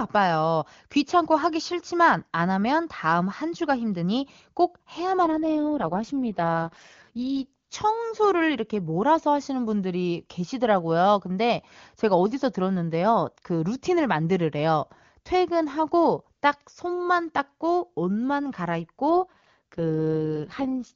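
From 5.24 to 7.54 s, and again from 19.14 s to the end, the speech turns rough, raspy and synthetic without losing bandwidth or breaking up. This is an AMR rate drop, and the sound fits the wideband codec stepping down from 23.85 to 6.6 kbit/s.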